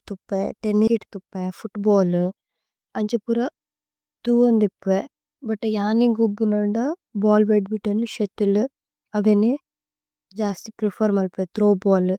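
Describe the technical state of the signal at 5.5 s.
At 5.5 s the speech signal is intact, with no audible technical fault at that moment.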